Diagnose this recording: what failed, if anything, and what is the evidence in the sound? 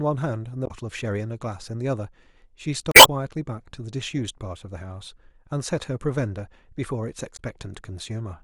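Damaged data in the compressed stream corrupts decoding. Glitches at 0.64–0.71, 2.91–3.09 and 7.33–7.40 s. The decoder misreads bad frames, then resynchronises.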